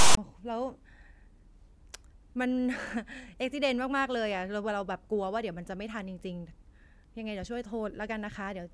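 From 0 to 0.17 s the speech is preceded by file tags played as audio: a block of text metadata followed by zero padding has been read as if it were samples. The text portion produces a loud, buzzy rasp biased to one side of zero, then the padding drops to dead silence before the speech begins. On a waveform this shows as a hard-edged, lopsided slab of dense values followed by a flat line. A spectrogram shows broadband energy with abrupt vertical edges, then nothing.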